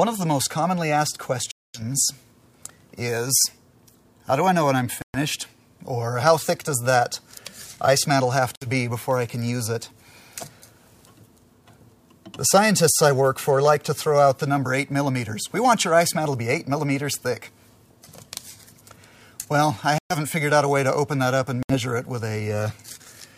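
Bluetooth stalls at 1.51, 5.02, 8.56, 19.98 and 21.63 s cut the sound to silence for 233, 121, 60, 121 and 68 ms, likely from delayed packets draining the headphone buffer.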